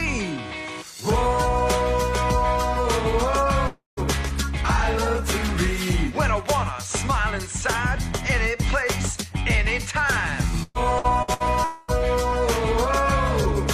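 From 3.67 to 4.00 s the audio breaks off, likely a long network dropout: about 0.3 s never arrives, the last sound is stretched into a fading buzz, and roughly 0.15 s of silence follows before the audio resumes with that stretch lost. It is one continuous gap, not a string of short ones.

From 10.63 to 11.49 s, repeated packet loss gives a choppy texture. Six separate holes, the longest 117 ms, are each patched by extending the previous sound, so about a third of this span is filler. The fault is recognisable by the rapid on-off stutter.

From 11.64 to 11.91 s comes a second single hole, likely another long network dropout. About 0.24 s is missing and is filled almost entirely by the fading continuation, with no silence before the audio returns.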